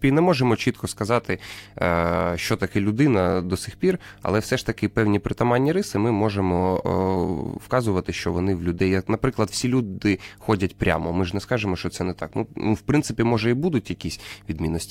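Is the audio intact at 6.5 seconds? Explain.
No: mains hum runs through the whole clip, including 6.5 s, where power-line coupling adds a steady 50 Hz tone roughly 30 dB below the speech.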